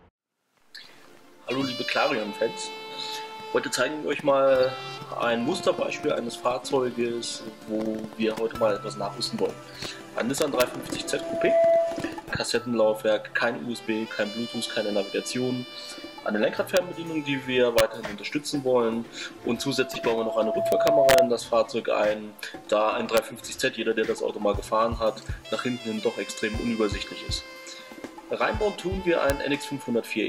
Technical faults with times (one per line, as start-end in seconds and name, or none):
10.42-10.62 integer overflow
10.98-12.27 loudspeaker feedback squeal
16.77 integer overflow
17.78 integer overflow
19.44-21.33 loudspeaker feedback squeal
19.91-19.97 corrupt frame decoded
20.72-21.18 integer overflow
23.17 integer overflow
29.30 integer overflow